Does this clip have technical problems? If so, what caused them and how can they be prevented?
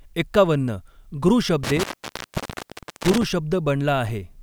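Yes. An intermittent contact occurs between 1.64 and 3.23 s. A loose plug or cable opens the line for about 1.22 s, and the speech cuts out with crackle at each edge and faint hiss while open. A clean digital dropout would be silent and edgeless. Securing connectors and replacing worn cables prevents this.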